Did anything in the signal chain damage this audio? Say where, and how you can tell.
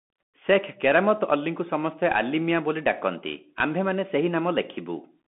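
Yes. Throughout, the speech sounds muffled and granular, with scratchy s sounds and nothing above 3.8 kHz. The cause is the Bluetooth CVSD headset codec's adaptive one-bit delta coding, at the codec stage.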